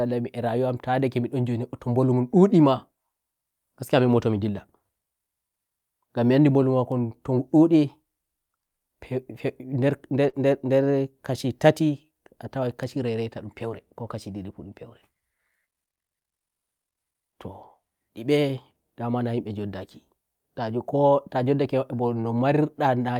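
At 10.29 to 10.35 s there is a short concealed packet loss. About 40 ms of the speech arrived too late for the decoder. The receiver patched roughly 34 ms by extending the preceding sound, then blended back. It is heard as a brief smear.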